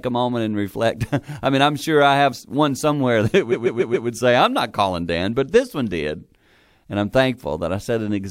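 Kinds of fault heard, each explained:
Repeated frames: a short chunk of the compressed stream got played over again, so the decoder loops the same slice of speech like a stutter. Here a block of about 139.3 ms, which fits a run of three frames, plays four extra times in a row from roughly 3.51 to 4.07 s. That gives a quick rattling repeat in the speech, and the clip runs 557.3 ms longer than it should.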